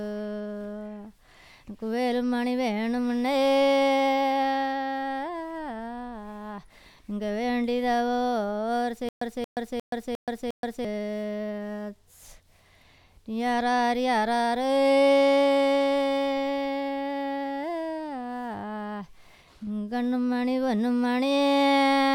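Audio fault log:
9.09 to 10.85 s, stutter with silent gaps: a 229 ms burst repeats five times, each followed by about 126 ms of dead silence, a steady 354 ms cycle, likely a stalled stream replaying its last fragment rather than skipping ahead.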